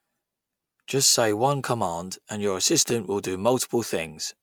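Speech with overlapping chunks: at 0.89 s and again at 2.90 s, between "one command and your" and "will do", about 6.5 ms of audio plays twice. Each 2.0 s chunk starts before the previous one ends, so every join produces a brief click-like stutter.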